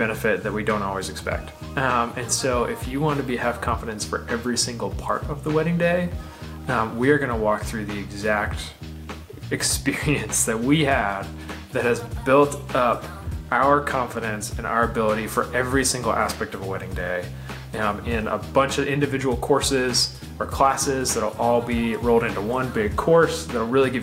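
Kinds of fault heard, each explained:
No technical faults can be heard anywhere in the recording. Nothing stands out as a glitch or defect that would need explaining.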